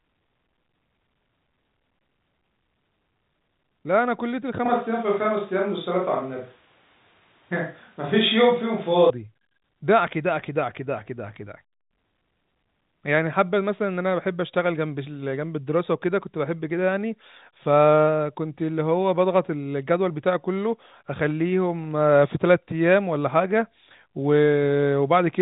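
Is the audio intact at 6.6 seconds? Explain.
No. From 4.66 to 9.10 s the sound turns roomy and hollow with thinner bass, most likely a switch to a distant microphone. The level barely changes, but room noise rises to about 35 dB under the speech. On a spectrogram this appears as smeared reverb tails and a raised noise floor, still capped near 3.8 kHz by the telephone band.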